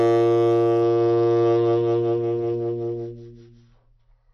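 A short piece of music that drops in quality abruptly at 0.82 s and stays degraded to the end. That's an adaptive stream switching to a lower bitrate. Everything above 6 kHz is gone, so the top end turns dull, with more codec artefacts coming through. There's no gap at the switch, just a sudden step down. It sounds like the connection slowed and the player moved from roughly 96 kbit/s AAC to something nearer 24 kbit/s.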